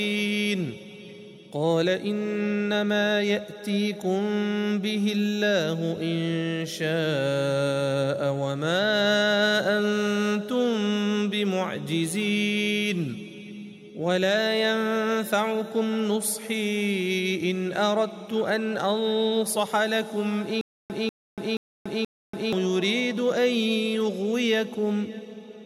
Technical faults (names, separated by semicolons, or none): stutter with silent gaps